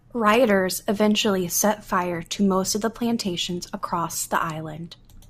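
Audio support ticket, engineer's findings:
Brief click-stutter at 3.81 s, just after "most of the plantations". Repeated buffer: one short piece plays twice with a hard join, which fits a 10 ms buffer. Playback device underran and replayed its last buffer, with essentially nothing lost.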